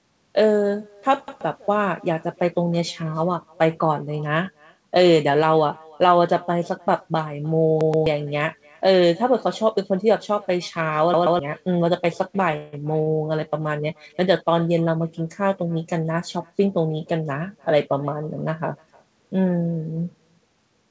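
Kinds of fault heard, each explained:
Echo with no canceller: The far end's loudspeaker leaks into its microphone uncorrected. Throughout the speech, a faint copy about 28 dB down trails each phrase by roughly a third of a second.
Repeated buffer: Late audio made the device replay its last 128 ms block, which fits a 2048-sample buffer. It stutters once near 1.3 s and twice near 7.8 s and 11.1 s.
Call audio freeze: Packets likely stalled and the jitter buffer emptied. Around 12.57 s the last sound is held as a fading buzz for about 160 ms, then the speech resumes intact.
Short stall from a late packet: One packet arrived late. At 13.03 s a sound is stretched by about 39 ms with a slight buzz, and nothing is lost.
Jitter buffer speed-up: Excess buffered audio was trimmed in small pitch-period slices. From 15.62 to 16.11 s the speech runs about 8% faster at unchanged pitch and sounds hurried.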